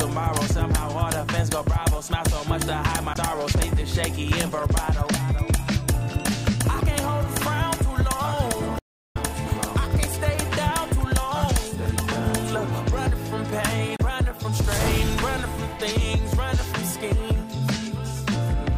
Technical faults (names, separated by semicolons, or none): damaged data in a compressed stream; audio dropout to silence